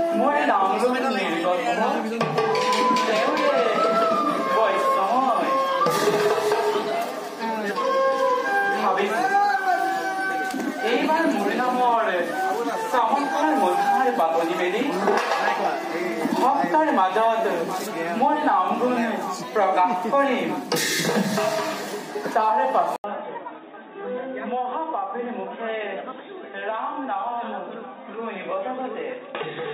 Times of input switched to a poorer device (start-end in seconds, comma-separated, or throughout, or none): 22.96-29.74